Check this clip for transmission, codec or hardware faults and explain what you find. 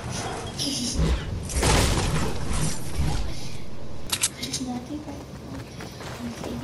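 Two faults are present. A DC step runs from 2.14 to 4.07 s: the waveform's zero line jumps to an offset and then returns, giving a low thump at each edge while the sound continues unchanged. At 4.27 s, audio missing between chunks is heard as a brief skip where a few milliseconds vanish and the two sides butt together, likely a piece dropped at a 2.5 s chunk boundary.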